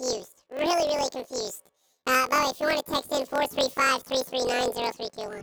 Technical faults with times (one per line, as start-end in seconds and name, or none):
0.00-5.42 planar audio read as interleaved